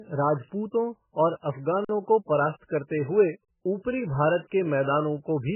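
The speech is dull and watery from start to finish. Nothing remains above 3 kHz. Weak detail flickers in and out, and consonants smear. This is likely heavy MP3 compression at a very low bitrate, around 8 kbps.

From 1.85 to 1.89 s, the sound freezes flat for about 46 ms. This is an underrun with held sample. The output buffer ran dry, and the converter held its last value. Playback resumes where it stopped, so the dropout is soft.

From 3.45 to 3.48 s, after "करते हुए" and before "ऊपरी भारत के", a second underrun with held sample holds the waveform flat for about 35 ms. No audio is skipped. The speech simply pauses and then continues.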